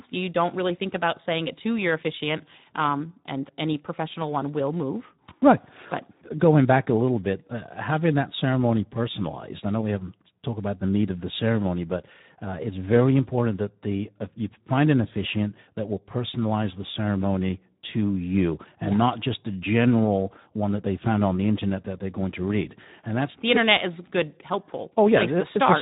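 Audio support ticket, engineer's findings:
Speex codec artefacts throughout, whole clip. Speech noisy, hoarse, plainly degraded; excitation starved at a low setting, consistent with roughly 11 kbps. Spectrogram: hard ceiling near 3.8 kHz, smeared harmonics, noisy fill between formants. Waveform: envelope intact, fine structure rough.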